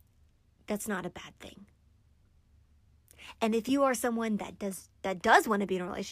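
No technical faults can be heard in this recording.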